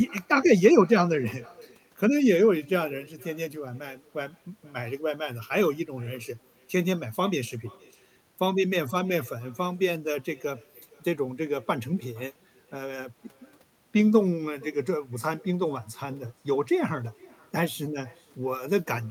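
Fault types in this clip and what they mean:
Echo with no canceller: the far end is playing the call through a loudspeaker, its microphone catches that playback, and nothing there strips it out, so the talker's own speech returns after the network round trip. Here it runs through the whole clip, every phrase trailed by a faint, thin copy arriving around half a second later. It sits about 26 dB under the direct speech.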